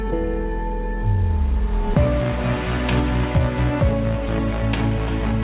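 The audio comes through a call path that works as intended, with its narrowband character and nothing above 4 kHz fitting a G.711 mu-law link at 64 kbps, and no technical faults appear anywhere in it.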